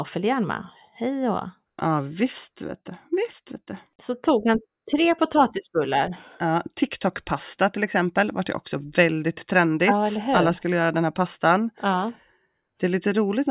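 Listening to the speech recording turned up nothing that stood out as a technical problem.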